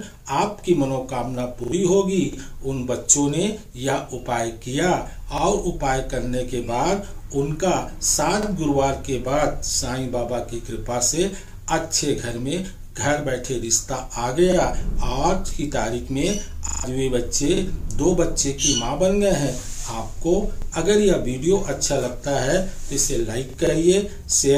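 At 1.64 s a repeated buffer occurs: new audio arrived late, so the last 40 ms block replays twice more, producing a stutter. The waveform shows identical blocks with hard edges, and the spectrogram shows vertical seams, which fits a 40 ms buffer. About 70 ms of audio is lost.

From 2.33 s, overlapping chunks recur every 3 s, at 2.33, 5.38, 8.43, 11.48, 14.52, 17.57, 20.62 and 23.67 s. Each new chunk begins about 48 ms before the previous one ended, so that slice plays twice, giving a regular click-stutter. Each join appears as a duplicated waveform segment and a thin vertical line on the spectrogram.

At 16.68 s the repeated buffer returns, looping the same 40 ms four extra times for a longer buzz-like stutter. The waveform shows a run of identical copies, and about 150 ms of audio is lost.

At 23.50 s one more repeated buffer plays a single extra 40 ms copy, a brief click that replaces about 40 ms of audio.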